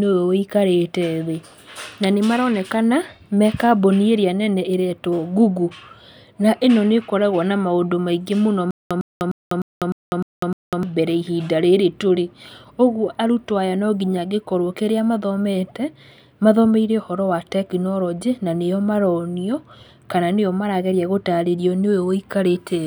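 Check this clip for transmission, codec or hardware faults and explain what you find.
One transmission fault is present: a stutter with silent gaps between 8.71 and 10.83 s in this speech clip. The stream or player likely stalled, and on each retry it replayed the last buffered fragment before running dry again. A 104 ms burst repeats seven times, each followed by about 199 ms of digital silence, giving an even 303 ms rhythm. The speech that should have filled those two seconds never plays.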